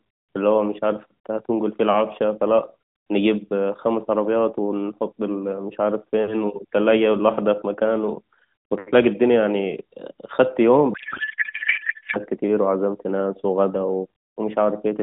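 A codec payload misread runs from 10.94 to 12.17 s: octet-aligned AMR frames are decoded as bandwidth-efficient, shifting every field, so the speech becomes garbled noise and warble that barely tracks it. Around it, the AMR narrowband path at a rate consistent with 12.2 kbps cuts everything above 4 kHz.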